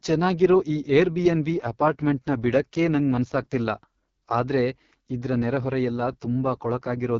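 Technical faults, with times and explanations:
Throughout: AMR wideband (HD Voice) codec. The speech has been squeezed through the codec at its bottom rate, which fits the 6.6 kbit/s mode. There are too few bits to model the vocal tract and pulse excitation accurately, so the voice comes out rough and raspy, with heavy coding damage. Above 6.4 kHz only synthetic shaped noise stands in for real detail, and nothing at all reaches past about 7.4 kHz.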